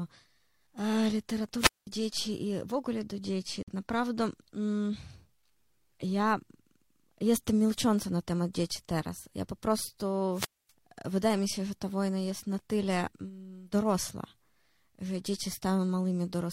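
A speech recording in which the sound twice swells into hiss, falls into near silence and then comes back: from 1.57 to 1.87 s, with about 203 ms of muting, and from 10.31 to 10.72 s, with about 247 ms muted just before "wydaje mi się że". This is a wireless microphone squelch dropout, where the analogue FM radio link weakens until the receiver's squelch cuts the output. Right after "w ogóle do dzieci", at 3.63 to 3.68 s, a hard-edged 50.7 ms hole of silence interrupts the audio. It is a gap between stream segments: mismatched time stamps at a segment boundary, which fits 6-second segments, leave a space the player fills with silence, without dropping any audio.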